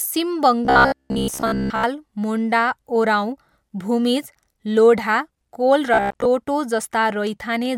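From 0.65 to 1.84 s, and again from 5.94 to 6.27 s, the speech collapses into a stiff metallic buzz at about 67 Hz. That's robotic sound from repeated short buffers, likely a roughly 15 ms chunk looped while most of the real audio gets skipped.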